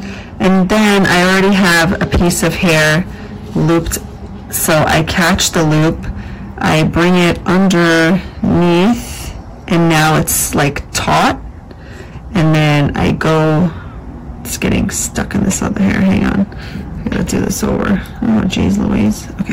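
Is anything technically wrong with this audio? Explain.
Yes. Throughout the recording, every loud moment carries a harsh, buzzing fuzz rather than occasional crackle, which is the sound of hard clipping. The signal is driven roughly 23 dB beyond what a stage in the chain can pass, so about a fifth of the waveform hits the ceiling and is sliced flat. Those squared-off peaks create strong high harmonics that weren't in the original sound, smearing grit across everything above quiet levels.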